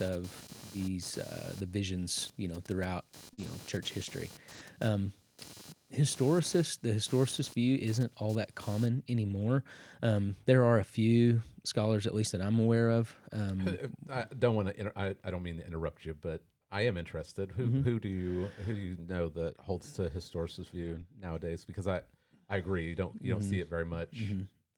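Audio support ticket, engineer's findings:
Computer activity noise, 0 to 8.86 s. Buzzy chirping pulsing at roughly 200 Hz, around 20 dB under the speech, gone after 8.86 s. Load swings on CPU/GPU or mouse pushing current through the shared audio ground. Tracks machine activity, not the talker.

Short concealed packet loss, 3.33 to 3.39 s. Brief smeared wobble. About 40 ms never reached the decoder in time. Concealment stretched the preceding sound across the hole, then crossfaded back into real audio.

Lost packet rebuilt from error correction, five spots. 3.37 to 3.47 s and 4.51 to 4.61 s, 60 ms each. 9.39 to 9.49 s, just before "um there are a", also 60 ms. 20.83 to 21.01 s, right after "that holds to historicist", 100 ms. 23.41 to 23.43 s, after "you don't you don't", 20 ms. No gaps, just rougher, noisier stretches. Lengths fit runs of 20 ms packets. Decoder played the low-bitrate Opus in-band FEC copies carried in the following packets.

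Dropped buffer (overrun), 5.66 s. Small forward jump in the sound, no silence, a few ms skipped. Likely the app didn't read the capture buffer before the hardware overwrote it, so the two sides got butted together.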